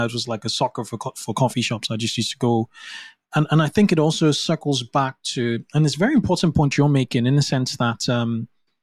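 At 6.40 s, between "and it's a very" and "point you're making in", a block of digital silence about 2.7 ms long cuts the speech, which fits a 128-sample output buffer left unfilled. With no fade, it sounds like a sharp tick. The waveform drops to a flat line near zero.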